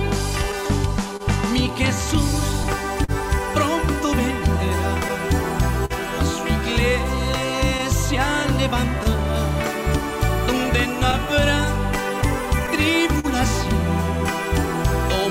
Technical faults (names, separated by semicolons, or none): clock drift between sender and receiver; repeated timing corrections; scattered short gaps; short stall from a late packet